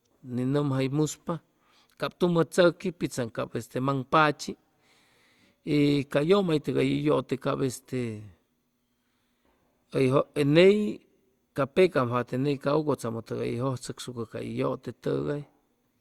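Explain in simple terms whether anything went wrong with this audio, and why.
Listening to the whole recording, nothing went wrong: the speech comes through steadily, with nothing that stands out as a problem.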